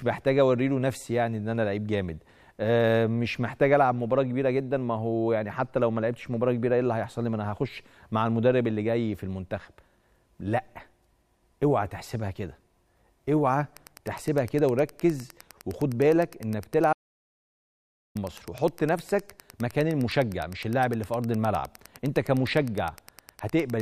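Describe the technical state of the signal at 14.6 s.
At 14.6 s the signal carries Wi-Fi interference, which begins at 13.74 s and runs to the end of the clip. A Wi-Fi radio near the audio circuitry emits a beacon every 102.4 ms, and the circuit rectifies that radio energy into the audio band. The result is a steady ticking at just under ten clicks per second, sitting well below the wanted sound, roughly 25 dB down.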